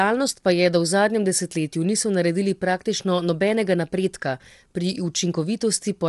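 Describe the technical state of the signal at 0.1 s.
At 0.1 s the speech already carries the low-delay AAC compression damage that runs through the whole clip. It sounds rough and grainy, with noise filling the gaps between the voice harmonics and nothing above about 11.7 kHz. The likely cause is AAC-ELD at a low rate, which fits roughly 32 kbps. Its very short frames blur pitch structure, so the damage is grainy rather than the smeared pre-echo and warble of long-frame codecs.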